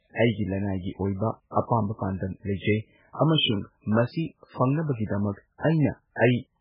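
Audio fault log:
Throughout: MP3 compression. The speech is dull and watery, with nothing above 5.2 kHz, and faint content flickers in and out, giving a swirling, chirpy texture on sibilants and smeared consonant onsets. The likely cause is an encoder starved of bits, consistent with a very low bitrate around 8 kbps, cutting the treble and zeroing weak lines that change frame to frame. A spectrogram shows a hard ceiling at 5.2 kHz and a patchy, blocky pattern of isolated islands below it.
0.78–0.84 s and 1.51–1.56 s: pre-echo. A brief hiss leads each of these two attacks by about 55 ms, and the onset itself sounds softened rather than crisp. A sharp transient fell late in a codec block, so quantisation noise scaled for the loud part was spread back across the quiet stretch before it. On a waveform, a low fuzzy ramp precedes each attack. On a spectrogram, a faint broadband smear runs ahead of the onset's vertical edge.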